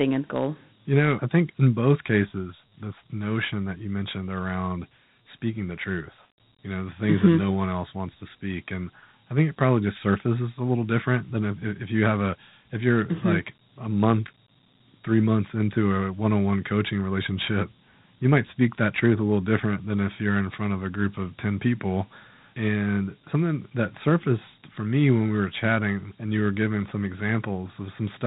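From start to finish the audio carries Dialogic VOX ADPCM damage: a gritty hiss that tracks the speech, with nothing above 3.9 kHz, consistent with 4-bit OKI ADPCM at 32 kbps. A spectrogram shows a flat ceiling there, and the waveform carries coarse grainy noise riding on each syllable.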